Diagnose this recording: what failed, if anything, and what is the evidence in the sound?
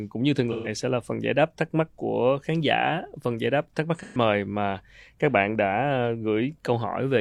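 Codec stage: AAC frame loss with concealment at 0.52–0.68 s and 4.03–4.18 s; the decoder patched roughly 128 ms each time from prior spectra, leaving smeared, phasey gaps.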